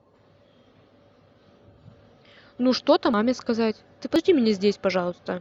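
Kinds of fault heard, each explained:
Compressed frames skipped: whole frames of the encoded stream went missing or were rejected by the decoder as damaged, so playback twice jumps ahead by about a tenth of a second of speech.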